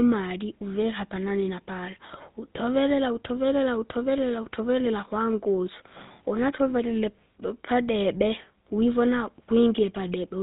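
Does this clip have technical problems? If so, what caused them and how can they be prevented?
Yes. The speech carries GSM full-rate codec damage from start to finish. Nothing is heard above 4 kHz, so the sound is dull and boxed in. A buzzy, gravelly roughness runs through the voice. This codec fakes the throat and mouth with a filter and feeds it a coarse pulse train, discarding most of the excitation detail. The plainly audible harshness fits a 13 kbps GSM stream. Prevent it by capturing or relaying the audio through a wideband codec at a higher bitrate.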